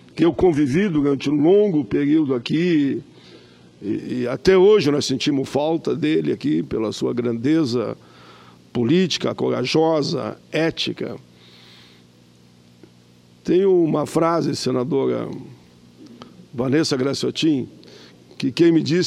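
From 0.0 to 4.0 s the player is an adaptive stream starting at a low bitrate: it opened on a lean version to begin playback fast, then switched up once it had gauged the connection. The opening sounds dull and smeary, with nothing above 11.8 kHz, the top end thin and synthetic, which fits a 16 kbit/s HE-AAC stream. At 4.0 s clarity jumps abruptly, with no gap, consistent with a step to 96 kbit/s AAC-LC.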